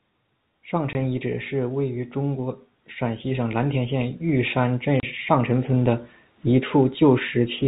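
Packets were lost in transit and the receiver played silence in their place, which is packet loss filled with silence. That leaves a 20 ms hole at 0.93–0.95 s before "遗址是位" and a 30 ms hole at 5.00–5.03 s between "田县玉山" and "上陈村的", fitting 10 ms packets. Each abruptly chops the G.711 telephone-band speech.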